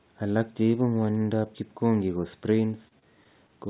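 From 2.88 to 3.51 s, repeated packet loss (robotic sound) leaves four holes, up to 30 ms each, refilled with repeated audio: choppy, with smeared repeating blocks on a spectrogram.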